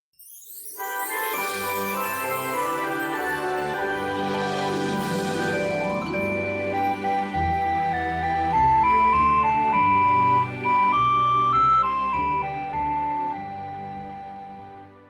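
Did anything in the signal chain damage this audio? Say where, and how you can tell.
No, nothing in the signal chain damaged this audio that I can hear.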